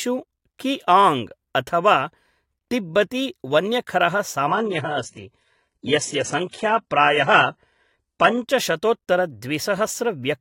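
From 4.47 s to 8.47 s, the speech plays from an adaptive stream at a lower bitrate. The connection slowed. Nothing remains above 11.1 kHz. The treble turns thin and synthetic, which fits a very low-rate HE-AAC stream. The quality shifts abruptly, with no gap.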